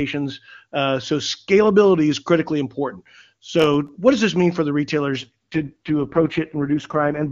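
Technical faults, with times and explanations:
3.60 to 3.89 s, processor overload crackle: the processor misses a run of audio buffer deadlines. The crackle fits several consecutive buffers lasting a millisecond or two each. Every missed buffer leaves a tiny hard-edged silent gap, and together they make a short gritty tearing over the speech.
5.17 to 7.32 s, AMR rate drop: the AMR-WB codec is pushed to a lower rate until the end, which fits a step from 23.85 down to 6.6 kbit/s. The bandwidth holds and nothing drops out, but the speech turns rough, raspy and synthetic.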